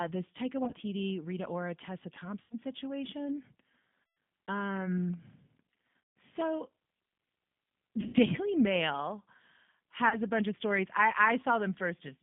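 Throughout, the speech carries the rough, slightly synthetic texture of the G.729 codec at 8 kbit/s, confined to about 150 Hz to 3.6 kHz. That marks it as codec coding, not mere band-limiting.

VoIP packet loss concealed by the speech codec strikes at 0.65–0.76 s (scattered dropouts), 2.42–2.55 s, 4.04–4.17 s, 5.99–6.16 s, 8.01–8.15 s and 10.09–10.17 s, just before "a bunch of stories". Each one smears into a fading buzzy tone or coloured noise instead of going silent.

At 6.41 s, a block of digital silence lasting about 0.4 ms leaves only a tick or dip, an abrupt cut to zeros with no concealed tail.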